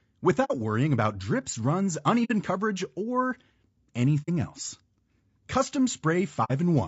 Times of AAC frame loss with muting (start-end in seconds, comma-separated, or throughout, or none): 0.44-0.51, 2.24-2.31, 4.22-4.29, 6.44-6.51